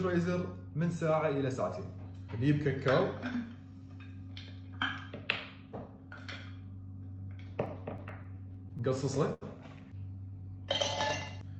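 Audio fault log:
7.65–8.90 s, scattered short gaps: About seven small holes fall across this stretch, none longer than roughly 15 ms. Together they cover around a tenth of a second, a small share of the span. Each hole is bridged by carrying the preceding sound forward for a moment. The audio stays clear, but brief ticks and smears dot the passage. These point to individual packets arriving late or not at all, with the receiver papering over each one.
9.34–9.43 s, short stall from a late packet: One packet missed its slot and the jitter buffer ran dry. The receiver held the last sound for 77 ms until the packet turned up, then resumed from the same point. Nothing is lost. The held moment drags slightly. Everything after it runs 77 ms later than before. The call codec's top end, which stops near 8 kHz, stays the same through the stall.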